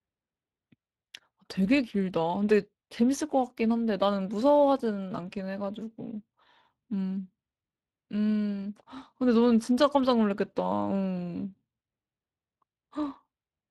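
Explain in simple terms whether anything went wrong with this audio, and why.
The whole recording shows Speex codec damage: this old voice-chat compression discards detail it cannot afford to keep, leaving the speech audibly grainy and hoarse from start to finish.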